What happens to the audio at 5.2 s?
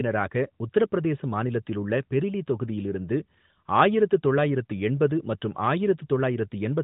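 Nothing goes wrong at 5.2 s: the audio stays intact there, carried through the AMR narrowband mobile codec with the band-limited, lightly coded character it has throughout, and nothing breaks, drops or distorts at that moment.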